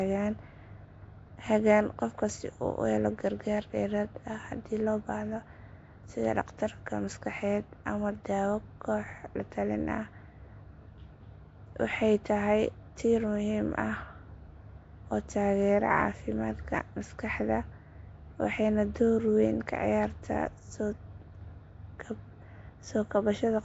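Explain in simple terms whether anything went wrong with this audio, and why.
Yes, something's off the whole way through. The speech has a rough, hissy fuzz hanging around it and a smeared, underwater feel, and nothing comes through above about 7.7 kHz, so the top end sounds dull. That points to Nellymoser compression, likely the old Flash microphone codec. It squeezes sound into small fixed chunks with very few bits, drops the quieter parts of the range entirely, and patches those gaps with noise, which is where the hiss comes from.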